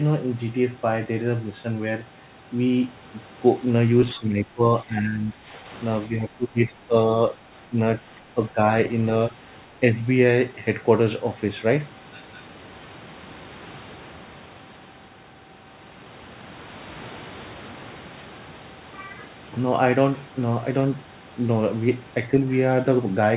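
When both ends talk at once, the echo canceller has likely failed to tell the near talker from loudspeaker echo and turns the speech down: speech suppressed in double talk. This happens from 4.16 to 5.67 s (a dip of about 10 dB), from 6.08 to 6.93 s (the deepest, about 15 dB), briefly at 7.68 to 7.79 s, and from 7.99 to 8.6 s. Each time, the speech sinks or thins out. This all happens within narrowband audio with nothing above 4 kHz, which fits a 64 kbps G.711 mu-law call path.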